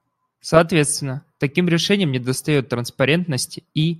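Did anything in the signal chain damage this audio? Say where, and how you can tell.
No, there's nothing here that points to damage at any stage of the chain, so this one can be left alone.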